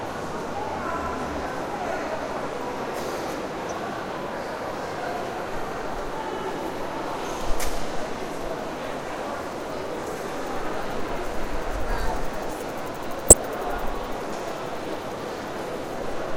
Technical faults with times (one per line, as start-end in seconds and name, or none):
13.28-13.33 corrupt frame decoded